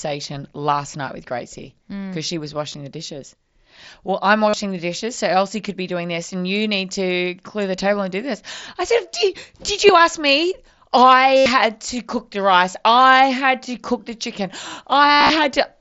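Packets on the Bluetooth headset link were dropped and concealed by repeating the best-matching recent stretch of waveform: concealed Bluetooth headset packet loss. Brief 15 ms gaps at 2.73 s (after "hmm mm she was") and 9.87 s (after "I said did did") are nearly hidden. Longer runs at 4.49 to 4.54 s, 11.37 to 11.46 s (before "to cook the rice") and 15.12 to 15.30 s buzz at full level, then warble slightly as the mSBC-coded speech resumes.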